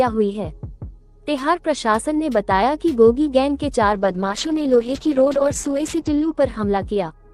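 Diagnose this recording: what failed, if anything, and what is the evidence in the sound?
A call bitrate drop in the network-driven codec stage runs from 3.95 s to 6.41 s. The bandwidth narrows from 20 kHz to 8 kHz and the sound turns coarse and watery, which fits a bandwidth estimate pushing the encoder from about 48 kbps to 9 kbps.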